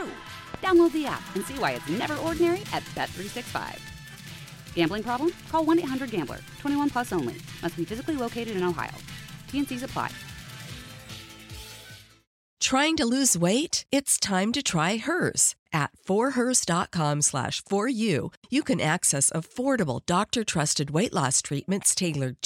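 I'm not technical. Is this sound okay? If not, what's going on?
No. There are two loud pops near the start, at about 0.54 to 0.57 seconds and again at about 2.03 to 2.06 seconds. Each is a single sharp click, much louder than the sound around it, and the audio keeps going underneath. A sudden electrical jolt likely caused them, from something like a plug being nudged, a switch, static, or a hiccup in the audio hardware, which briefly jumped the signal.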